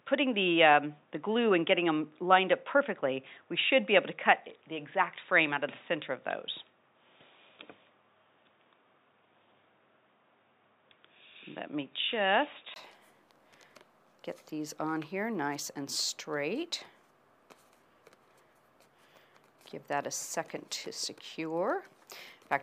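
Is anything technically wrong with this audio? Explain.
Yes. From 0.0 to 12.76 s the sound is band-limited, with nothing above about 3.8 kHz, so it comes across dull and boxy before opening up to full bandwidth after a brief dropout of about 20 ms at 12.76 s. This is likely an input switched to a poorer device, such as a headset call profile, whose narrow passband strips the upper range. There is no obvious level jump at the change, and the poorer input's background noise sits roughly 50 dB below the signal.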